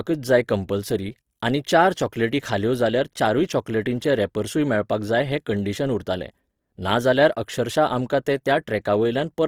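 Throughout the speech, the signal has likely passed through Opus compression at a low rate, consistent with around 24 kbps in its music-oriented mode. Starved of bits, the encoder fills bands with folded or noisy content, so the voice sounds rough and grainy, while the bandwidth stays full to about 20.3 kHz.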